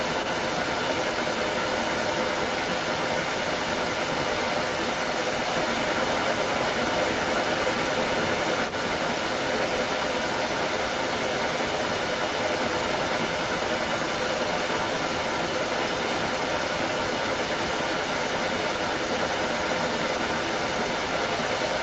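From the start to the end of the speech, at 21.8 s, a second copy of the voice trails the original by about 0.24 s, and it sits roughly 10 dB louder than the direct speech. This is an echo leak, likely from a far end whose echo canceller let its loudspeaker output back into the microphone. On a spectrogram, the voice's harmonic pattern repeats a quarter-second later, both copies stopping at 8 kHz; the waveform shows doubled, overlapping envelopes.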